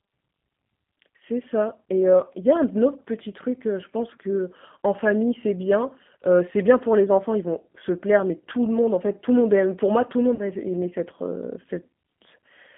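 Throughout the speech, the G.729 codec damage is plainly audible. The sound is rebuilt from a vocal tract filter, a pitch predictor and a few pulses per sub-frame, with a roughness and synthetic edge that fits an 8 kbit/s coder of the G.729A type. The band runs from 150 Hz to 3.4 kHz, so the top of the sound is missing and sibilants are dull.

From 10.35 to 10.41 s, VoIP packet loss concealed by the speech codec covers a 40 ms gap, which fits two lost packets. With no new data, the decoder kept repeating its last pitch and filter while lowering the gain, so the sound smears into a short buzzy tone or coloured noise that fades. Because each frame is built from the one before, the speech stays somewhat weak for a moment after the packets resume.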